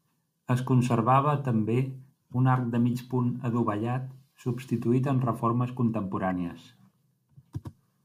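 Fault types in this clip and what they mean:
corrupt frame decoded: damaged compressed data was played rather than concealed, putting energy at wrong frequencies as quiet brief glitches at 2.75 s after "un arc" and 6.3 s after "adovellat substituït en reformes".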